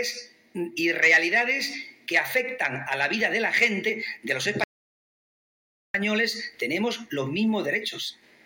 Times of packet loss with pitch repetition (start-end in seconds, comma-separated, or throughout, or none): none